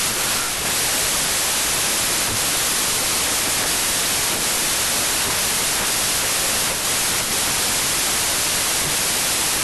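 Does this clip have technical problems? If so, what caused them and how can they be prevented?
Yes. A wrong sample width runs through the whole speech clip: packed 24-bit samples were read as 16-bit, mixing bytes across samples. Loud noise buries the speech, slowed and lowered to 0.667 of true speed and pitch. The spectrogram shows a dense broadband wash with faint, compressed harmonics beneath. Prevent it by confirming that the reader's declared sample format matches the writer's before decoding.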